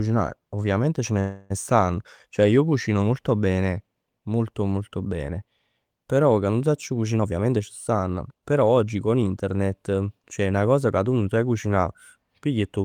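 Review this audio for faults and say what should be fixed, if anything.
Call audio freeze at 1.19 to 1.52 s: the speech stops advancing and the last sound is stretched into a fading buzz for about 0.31 s, most likely because packets stalled in transit and the jitter buffer ran dry. When audio resumes it picks up exactly where it left off, so nothing is lost; instead, a pause is inserted and the delay grows by that same 0.31 s. Prevention: give the jitter buffer more headroom, or improve the network path's stability, so short delivery stalls don't empty it.

Jitter buffer speed-up from 7.18 to 9.53 s: the speech plays at about 113% speed with unchanged pitch and sounds hurried. The buffer was holding more audio than its target, and the receiver shortened it by cutting out many small pitch-period-length slices in succession, roughly 0.3 s in total. Prevention: drain excess buffer more gradually, spreading the time compression over a longer stretch so the speed change stays below audibility.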